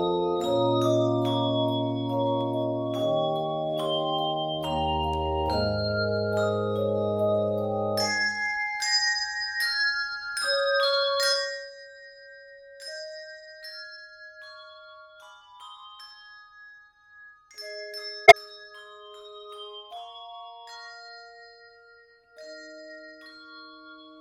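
A concealed corrupt frame sits at 18.26 to 18.34 s, a stretch of about 80 ms. The span fits roughly three damaged AAC frames. The decoder detected the bad bits and covered those frames itself, either muting them or filling them from the last good spectrum.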